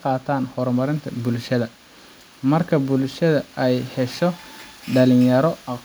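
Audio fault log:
The speech signal shows no audible technical faults anywhere in the clip.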